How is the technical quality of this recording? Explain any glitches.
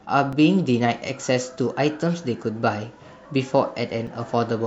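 Two short glitches break up the speech, at 0.33 s and again at 4.07 s, and both come from damaged data in the compressed stream. At each spot part of the encoded file is wrong, so the decoder can't make sense of that frame, loses its place and has to hunt for the next valid frame header. What you hear is a quick chirp or blip, gone in a few milliseconds each time.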